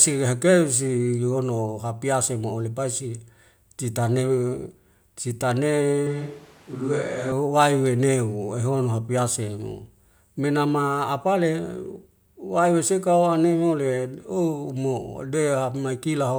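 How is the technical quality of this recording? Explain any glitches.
There's one glitch worth flagging. From 6.07 to 7.32 s the speech suddenly goes roomy and hollow, thinner in the bass, with more background noise creeping in, around 25 dB below the speech, and then snaps back just as abruptly. It sounds like a switch to a distant microphone, most likely the close mic's signal dropping out so a farther-off one, such as a camera mic, covered that stretch. The level barely shifts, so it's the tone that gives it away.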